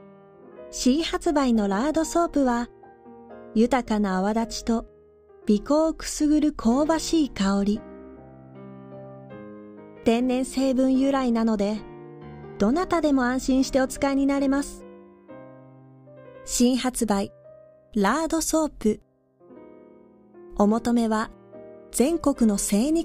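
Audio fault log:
0.00–16.1 s, channel delay (comb filtering): one channel lags the other by roughly two samples, a few hundredths of a millisecond, and summing to mono cancels shared content near 10 kHz, dulling the top end. A spectrogram shows a steady dark band there, absent after 16.1 s.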